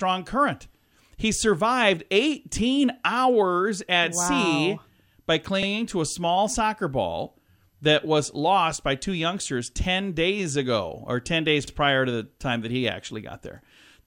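At 5.63 to 5.67 s, just before "to a small soccer", and again at 11.67 to 11.72 s, before "prior to the time", the speech stutters briefly. These are overlapping chunks: the audio was handled in 6 s chunks, and each new chunk began about 48 ms before the previous one ended, so that slice plays twice. Unlike a dropout, nothing goes missing. The speech doubles back for an instant, and the two hits are evenly spaced 6 s apart.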